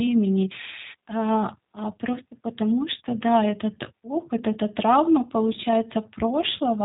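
Throughout, the speech passes through the G.729 codec, rebuilt from a predicted vocal-tract model, which fits an 8 kbit/s G.729A stream. Nothing survives above 3.8 kHz, and the sound is plainly rough and synthetic.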